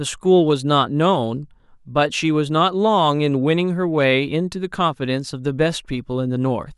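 Nothing technical to flag here; this bit of speech comes across without any audible fault at any point.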